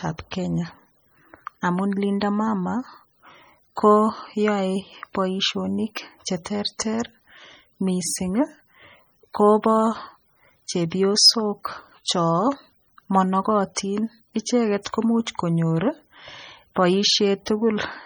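Heavy MP3 compression, likely at a bitrate around 32 kbps, has starved the encoder of bits throughout, so weak frequency lines drop in and out between frames. The speech sounds watery and swirling, with metallic chirps on s sounds and smeared attacks.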